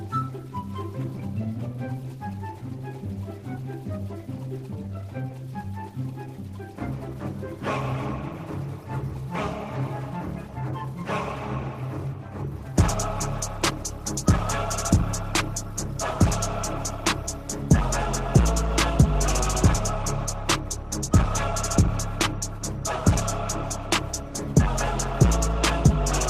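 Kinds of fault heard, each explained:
No technical faults are audible anywhere in the clip.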